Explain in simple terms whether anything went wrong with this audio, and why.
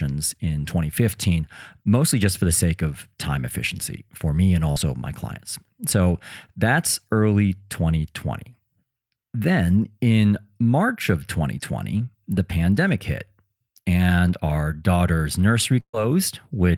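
Two bursts of packet loss hit this speech. At 4.71–4.78 s, after "efficiency for me and", the sound is briefly held and then skips ahead to "my clients". At 15.80–15.95 s, after "hit and our daughter's", the held sound fades into a short silence before the audio resumes, with a small chunk missing.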